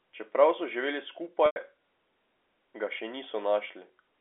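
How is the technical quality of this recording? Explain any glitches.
One glitch stands out against the narrowband telephone-line sound of the speech. From 1.46 to 1.56 s there is packet loss with pitch repetition: about 100 ms of audio, which fits five lost 20 ms packets, is bridged by repeating the last pitch period. That repetition fades to silence before speech returns through a brief cross-fade.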